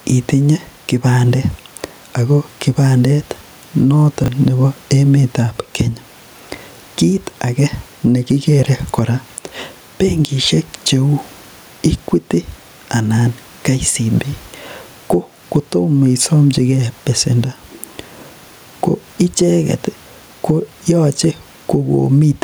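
Gain pumping runs through the whole speech clip. The level breathes by around 10 dB; room noise sits about 38 dB below the speech. The likely cause is input gain set far too high, with a fast limiter or compressor clamping down on each loud syllable and releasing in the gaps. This leaves the speech flattened and squashed in dynamics.

Chunks out of order occur between 4.24 and 4.28 s. A 20 ms chunk of audio arrived one chunk late and was played after the chunk that should have followed it. No audio is missing, but the sequence is swapped across those 40 ms. This creates three abrupt joins, heard as a brief jumbled stutter.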